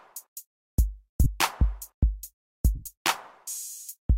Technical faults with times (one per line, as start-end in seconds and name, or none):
1.24-1.26 lost LE Audio frames
2.75-2.87 lost LE Audio frames